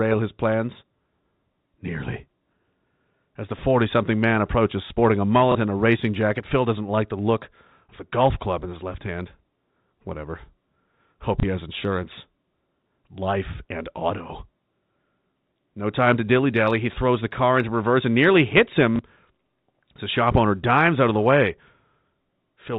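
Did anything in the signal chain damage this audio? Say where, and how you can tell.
Yes, at the network stage: packet loss with last packet repeated, at 5.52–5.55, 11.40–11.43 and 18.96–18.99 s. Each 30 ms gap, which fits one lost packet, was filled by replaying the previous packet, giving a small blip.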